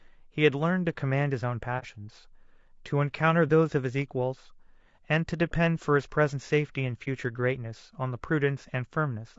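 Throughout, the speech sounds rough and grainy, with noise between harmonics and a dulled top band, likely low-delay AAC compression (AAC-ELD) at roughly 32 kbps. At 1.79 to 1.84 s and again at 7.04 to 7.08 s, AAC frame loss with muting leaves brief dips where a lost frame was zeroed and faded out and back in.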